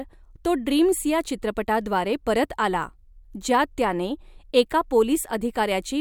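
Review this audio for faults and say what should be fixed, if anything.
No faults found in the speech recording, so nothing needs fixing.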